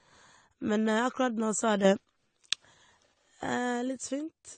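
From the start the speech is dull and smeared, with nothing above 9 kHz and a warbling, fizzy edge on sibilants, likely AAC compression at a bitrate around 32 kbps rather than simple low-pass filtering. At 1.85 s a sudden gain jump lifts speech and background noise together by about 6 dB, likely an unramped digital gain change, until 2.05 s, unlike a fade or compressor action.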